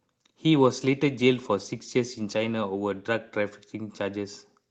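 Speech over a call link. From 0.53 s to the end, a call bitrate drop leaves the audio coarse and watery, consistent with the encoder being forced from about 32 kbps down to about 14 kbps.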